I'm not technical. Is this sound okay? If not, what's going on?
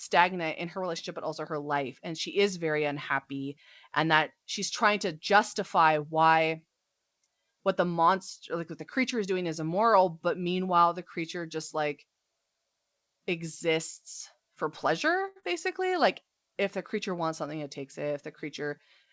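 No, there are four short glitches, all bunched near the end, typical of audio arriving over a call connection.

At 15.28 to 15.38 s, just after "exists for pleasure", there is a short stall from a late packet. A chunk of audio arrived late, so the receiver held the last sound for about 78 ms while waiting. Nothing is lost, but the sound hangs slightly too long.

Right after, at 15.40 to 15.45 s, comes a short concealed packet loss. About 60 ms of audio never arrived in time. The receiver patched the gap by extending the previous sound, which comes across as a brief smear, and part of the word can go missing.

From 15.89 to 16.35 s there is a jitter buffer slow-down. To rebuild its reserve, the receiver repeated tiny slices of the sound, adding 42 ms. Speech plays at about 93% speed without changing pitch, so it sounds slightly drawn out.

From 17.47 to 18.11 s, after "if the creature wants", a jitter buffer speed-up does the reverse. 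The receiver trimmed roughly 50 ms in tiny pieces to cut delay, so the speech runs at about 106% speed and sounds slightly rushed.

The G.722 call path itself carries nothing above 8 kHz, which gives the audio a slightly muted top end.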